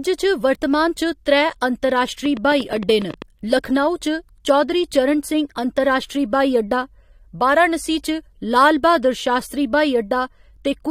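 From 2.26 to 3.23 s, likely interference or a faulty connection injects a train of clicks: about ten uneven pops, 11.4 per second, poking above the speech.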